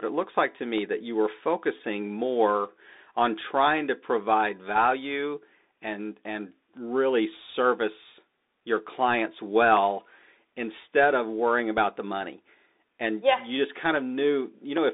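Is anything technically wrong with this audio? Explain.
Yes. The whole clip has passed through a Bluetooth CVSD headset codec. This narrowband scheme sends one bit per sample, stepping the waveform up or down with an adaptive step size, which fits a 64 kbit/s link. The speech sits in a band of roughly 250 Hz to 3.7 kHz, so it sounds thin and boxy. Fast, loud high-frequency detail outruns the step and distorts. S sounds turn scratchy, and a granular hiss runs beneath the speech.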